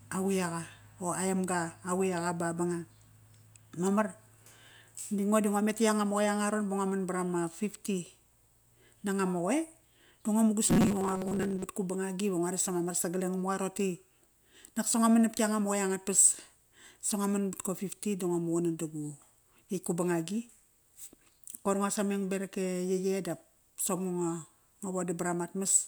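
From 10.66 to 11.67 s the speech collapses into a robotic sound from repeated short buffers: a rigid, metallic buzz fixed at 188 Hz that still loosely tracks the syllables. Likely cause: new audio arrived too slowly, so roughly half the time was filled by looping a fragment about 5.3 ms long while real audio was skipped. Unlike a gap or stutter, nothing goes silent, and the locked pitch is set by the loop length, not the talker.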